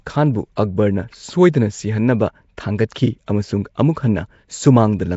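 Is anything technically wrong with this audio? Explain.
Yes. Throughout, the speech carries a rough, hissy halo and a smeared, underwater quality, with nothing above 7.7 kHz, likely Nellymoser compression. Its fixed two bits a sample leave weak bands noise-filled, which fits about 32 kbps and separates it from plain band-limiting, which only muffles.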